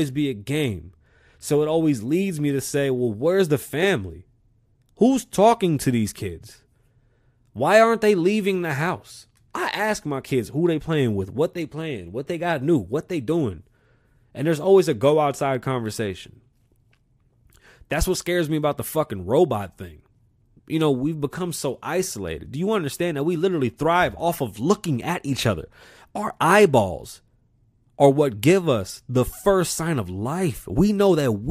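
No technical faults are audible anywhere in the recording.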